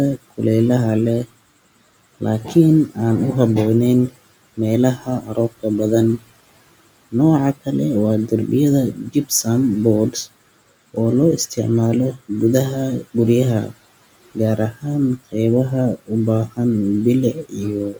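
From 0.17 to 2.96 s, and again from 4.1 s to the end, soft consonants and word endings sound swallowed, dipping by up to about 18 dB. This is speech cut by the noise suppressor, which treated those quiet stretches of speech as the room noise sitting about 27 dB below it.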